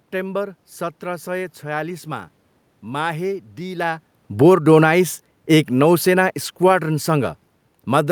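From 4.26 s to the end, the automatic gain control judges the input too loud or its background noise too strong and steadily pulls its gain down. The speech sinks gradually, and the room noise sinks along with it, unlike the talker's shift in position around 4 s.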